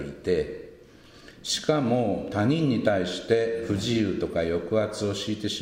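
No technical faults can be heard anywhere in the recording. Nothing breaks the sound at any point: there are no gaps, jumps, or sudden changes to catch the ear.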